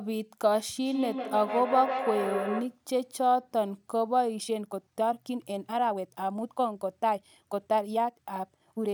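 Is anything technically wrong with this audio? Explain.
Yes, two faults can be heard in this speech.

From 0.86 to 2.79 s there is feedback echo between two devices. Two devices on the same call share a room, and one plays back what the other's microphone sent. That microphone picks up the playback again, and neither echo canceller removes it, because each handles only its own device's output. The speech returns at roughly 150 ms intervals, thin and ringing. The loudest repeat is about 6 dB below the direct speech. A waveform shows evenly spaced, decaying copies of each burst. A spectrogram shows the same patterns repeated along the time axis.

From 4.34 s to the end, the speech suddenly runs about 1.61 times faster while the pitch stays put. This is a time-stretched section, likely made by software squeezing the audio to fit a shorter length. To keep the pitch, it drops short pieces of sound and splices the rest together, so the delivery sounds rushed. 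On a spectrogram the harmonic spacing is unchanged while syllables are compressed in time, with small discontinuities at the splice points. The waveform envelope looks crowded.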